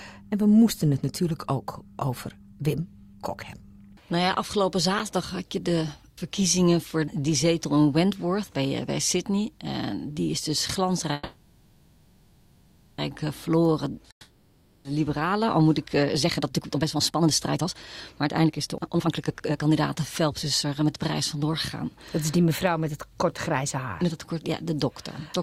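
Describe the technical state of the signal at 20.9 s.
At 20.9 s the signal is inside a jitter buffer speed-up that runs from 16.14 s to 21.84 s. The receiver had built up more buffered audio than it aims to hold. To drain that excess, it cut out short slices of one or a few pitch periods again and again. Playback runs at about 132 percent of normal speed while the pitch stays the same. Across the span, roughly two seconds of audio are removed, so the sound comes across as hurried.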